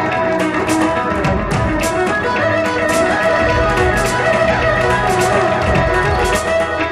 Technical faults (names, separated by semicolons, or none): doubled audio track